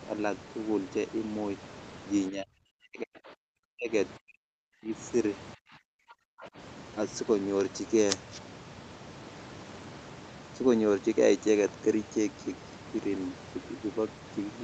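It's a speech clip, and the talker gets squashed three times, from 2.29 to 3.9 s, 4.17 to 4.92 s and 5.55 to 6.57 s, dropping by as much as about 40 dB. That's speech suppressed in double talk, likely the echo canceller ducking everything while the far end was talking too. Right near the end of that last dip, from 6.41 to 6.47 s, there's a brief scrap of the other side's voice leaking through at about 20 dB under the talker, likely residual loudspeaker echo the canceller missed. The band tops out at 8 kHz throughout, which fits a call codec running around 40 kbps.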